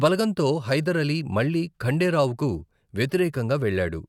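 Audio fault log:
No audible faults in this speech recording.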